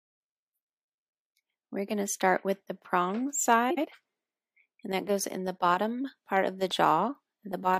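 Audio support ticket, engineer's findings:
Frames out of order, 3.70–3.86 s: two adjacent runs of decoded frames were swapped, each block 69.7 ms, which fits three frames apiece. Sound plays with its halves exchanged, giving a brief garbled flutter; no time lost.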